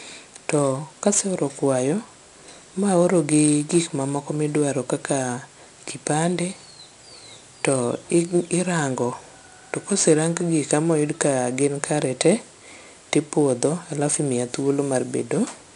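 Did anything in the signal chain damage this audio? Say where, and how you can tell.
Yes. 4-bit ADPCM compression at the codec stage, throughout: a gritty hiss rides every loud syllable, attacks distort, and nothing sounds above 10.6 kHz, which fits roughly 89 kbps.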